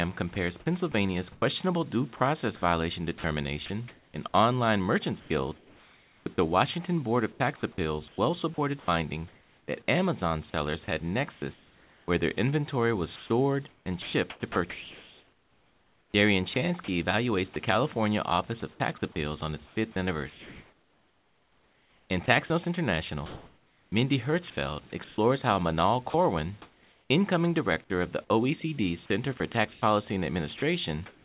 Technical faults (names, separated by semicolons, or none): sound chopped by the voice detector